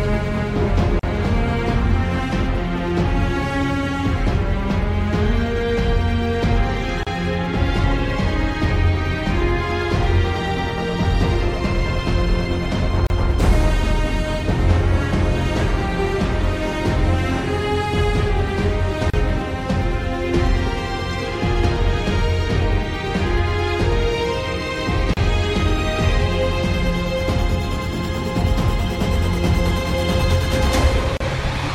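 The audio was encoded in separate pieces about 6 s long and joined without trimming each piece's encoder start-up delay and final-frame padding, producing a gap at a join of encoded pieces at each boundary. Continuous sound drops out at 0.99, 7.03, 13.07, 19.10, 25.14 and 31.17 s, for about 39 ms the first time and 34 ms thereafter, with smeared edges, before resuming exactly where it stopped.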